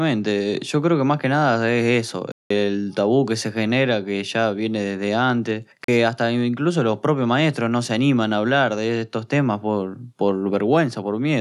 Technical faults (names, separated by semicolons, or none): Bluetooth dropout